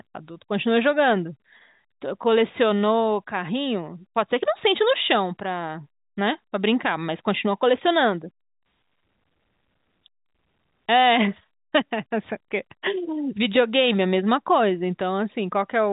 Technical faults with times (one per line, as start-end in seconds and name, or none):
none